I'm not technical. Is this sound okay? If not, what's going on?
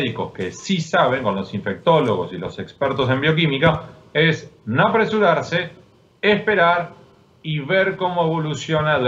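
Yes, nothing wrong can be heard in this sound.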